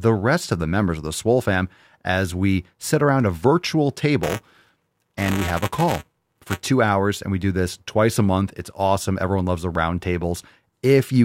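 From 4.23 to 6.67 s, the speech carries buffer tearing. The software filling the playback ring buffer and the hardware draining it have drifted out of step, so their positions cross within every period. A small slice of each buffer, a few milliseconds stale, gets played in place of fresh audio, with hard splices at both edges. The result is a robotic buzz at about 345 Hz, which fits a 128-sample buffer, riding on the speech wherever there is signal.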